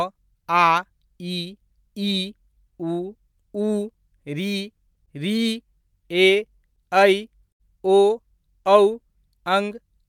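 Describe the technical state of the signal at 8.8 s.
At 8.8 s the signal is intact, with no dropout, clipping, distortion or other technical fault in the speech at that point.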